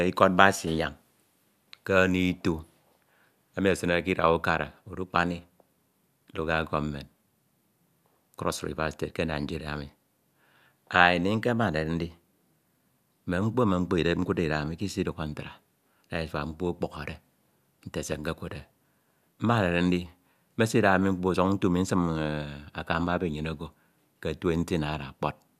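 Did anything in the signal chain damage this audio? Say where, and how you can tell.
No, nothing in this speech recording stood out as damage from any stage of the chain when I listened to it.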